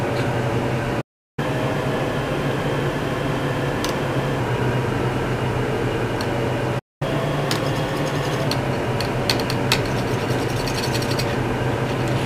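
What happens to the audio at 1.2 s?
At 1.2 s there is a playback stall from 1.01 to 1.39 s, likely the player starving for data. The sound cuts out for about 367 ms, a flat gap in the waveform and blank spectrogram.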